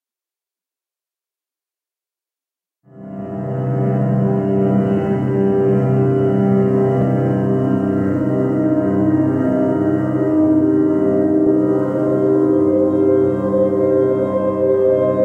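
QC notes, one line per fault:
7.02–7.04 s, loud pop: a single sharp pop a few dB above the sound, which continues underneath, likely from a brief voltage pulse entering the signal chain.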